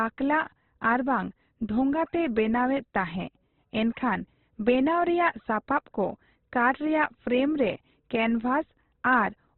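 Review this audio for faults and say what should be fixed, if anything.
Heavy Opus compression is the likely cause of damage that runs through the whole clip. The encoder was starved of bits, at a rate the sound suggests is around 12 kbps. It narrowed the band so that nothing remains above 4.2 kHz, and it filled the bands it kept by folding lower ones or inserting noise. The speech sounds dull and muffled, and its tonal parts turn rough and grainy. Encoding at a higher bitrate, or keeping a less compressed source, would prevent it.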